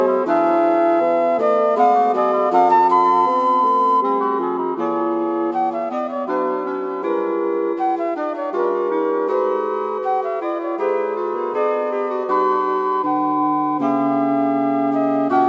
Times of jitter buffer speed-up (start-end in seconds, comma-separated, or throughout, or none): none